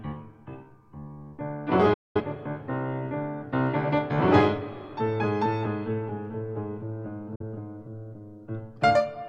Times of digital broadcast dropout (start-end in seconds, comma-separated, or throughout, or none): 1.93-2.21, 7.35-7.42